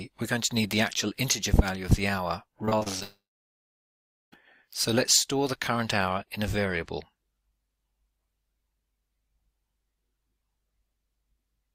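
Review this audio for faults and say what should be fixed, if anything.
From 2.65 to 3.03 s, repeated packet loss (robotic sound) occurs. Packets keep going missing, and each gap of up to about 28 ms is bridged by repeating the preceding sound, so about a quarter of that stretch is patched and it turns choppy. A larger jitter buffer and forward error correction would prevent this.

From 3.03 to 4.34 s, the sound stops arriving for about 1.3 s, most likely a long network dropout. A brief fading continuation trails off into roughly 1.1 s of silence, and the audio resumes with that portion lost. A more stable connection or redundant transmission would prevent this.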